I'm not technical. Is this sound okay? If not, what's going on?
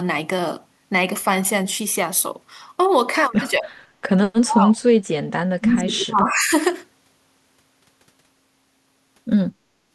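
No. Speech suppressed in double talk occurs at 3.58 to 3.71 s, 4.36 to 4.81 s and 5.41 to 6.52 s. The speech suddenly gets much quieter, briefly at first, then deeply for about half a second, then for about a full second. The likely cause is both sides of a call talking at once. The echo-removal system couldn't tell this talker from the other side's voice coming back, so it turned everything down.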